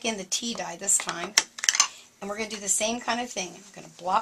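No technical faults can be heard anywhere in the signal.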